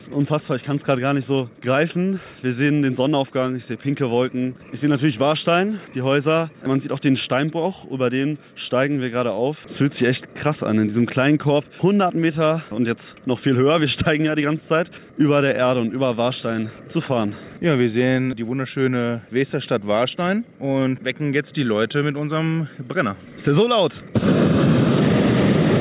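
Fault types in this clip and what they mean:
No faults detected.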